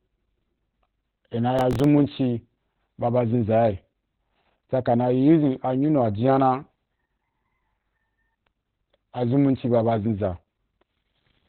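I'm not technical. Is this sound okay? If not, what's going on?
No. Opus voice compression runs through the whole clip. The speech was squeezed so hard that everything above about 4 kHz is gone, leaving it muffled, hoarse and slightly robotic.

Processor overload crackle occurs from 1.59 to 1.84 s, just after "i na". The computer missed several tiny few-millisecond deadlines in a row, and leftover old audio filled each gap, causing gritty tearing.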